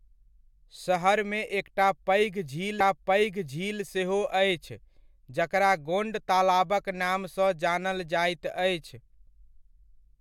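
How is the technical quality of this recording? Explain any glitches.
The recording has one clear playback glitch. From 2.79 to 3.80 s, a stream segment is repeated: the player delivered the same chunk twice, so about 1.0 s of speech plays again. A small blip marks the jump back before "सेहो अछि".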